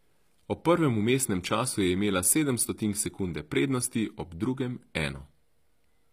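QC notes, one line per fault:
Throughout, HE-AAC compression: plainly audible codec damage, treble likely rebuilt by band replication; spectrogram shows upper bands repeating lower patterns, and nothing above 15.5 kHz.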